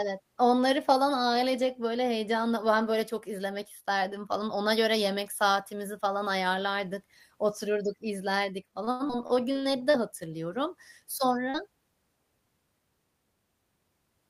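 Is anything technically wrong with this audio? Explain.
Yes, there are three network-related faults in this speech.

From 8.71 to 9.97 s there is repeated packet loss with a robotic sound. Ten gaps, the longest 88 ms, are patched by extending earlier sound. About a fifth of that stretch is synthetic, so it sounds choppy and robotic.

At 9.08 to 9.12 s there is a skip ahead. Roughly 70 ms of speech is dropped. Playback jumps forward, joining both sides almost directly.

At 11.50 to 11.57 s there is a short concealed packet loss. About 40 ms never arrived in time. The gap was filled by continuing the prior sound, leaving a brief smear.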